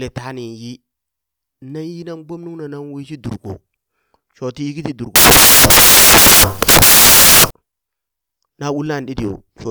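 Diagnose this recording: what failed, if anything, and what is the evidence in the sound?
Sample-format conversion failed. From 5.16 s to 7.51 s, right after "yiki ti", the speech gives way to loud, harsh broadband noise. This is samples built from the wrong bytes. The reader is misaligned by a byte, or has the byte order swapped. So the rapidly changing low bits land in the most significant position. Most samples become large, essentially random values.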